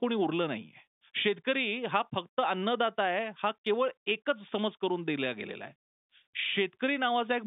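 Nothing stood out on listening to this speech, which sounds like ordinary narrowband telephone audio.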